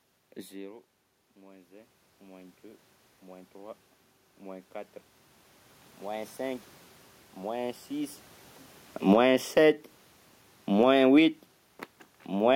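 Automatic gain rising, from 0.48 to 4.77 s and again from 5.99 to 8.19 s, shapes this speech clip. Near the start the talker moves away and the voice drops by about 21 dB. The gain control hears the weak input and slowly pushes its gain up, by about 10 dB over four seconds and then by about 5 dB. The voice and the room noise swell together, so the background lifts along with the speech.

Automatic gain falling comes next, from 8.97 to 9.52 s and again from 10.65 to 11.13 s. After the talker moves again around 8 s, the control finds the input too loud or its background too strong. The control pulls its gain down by about 11 dB and then by about 7 dB. Each time the sound sinks quickly, and the room background drops with it.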